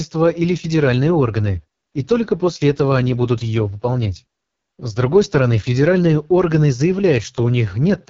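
Speech carried throughout by the AMR wideband (HD Voice) codec at what sounds like its lowest rate, 6.6 kbit/s. The pulse-driven vocal tract model leaves the voice rough and raspy with heavy coding damage, and nothing is present above 7.4 kHz, the top band being filled only with shaped noise.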